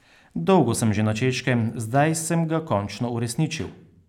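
Listening to the speech recording, nothing stood out as a technical problem at any point.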